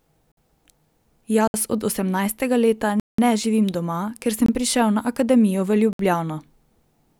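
Speech with a block of digital silence recurring: the output buffer likely went unfilled, so the sound cuts out and back with no fade, at 0.32, 1.48 (before "od osemnajstega"), 3.0 (186 ms, which fits an 8192-sample buffer), 4.46 and 5.93 s.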